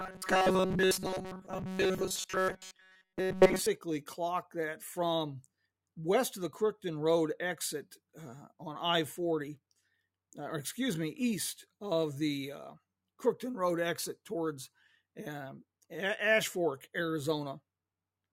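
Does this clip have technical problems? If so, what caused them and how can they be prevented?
Yes. From 0.01 to 3.66 s there is robotic sound from repeated short buffers, a rigid 188 Hz metallic buzz. It was likely caused by audio arriving too seldom, so a roughly 5.3 ms chunk repeated for most of that span while real audio was skipped. On a spectrogram this shows as evenly spaced harmonic lines at multiples of 188 Hz, and the waveform shows identical short cycles repeating. Prevent it by giving the audio path a larger buffer or a more reliable data feed so new audio always arrives on time.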